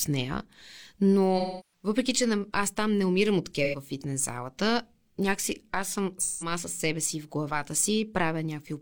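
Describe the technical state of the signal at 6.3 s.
At 6.3 s there's AAC frame loss with concealment, from 6.21 to 6.52 s. The decoder patches the gap from the last good spectrum, leaving a smeared, phasey, noisy stretch.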